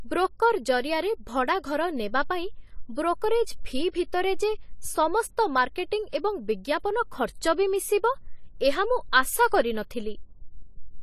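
Speech carrying AAC compression damage for its whole length: it sounds dull and smeared, with a warbling, fizzy edge on sibilants. A spectrogram shows nothing above 13.9 kHz, likely from AAC-LC encoding at a bitrate around 32 kbps.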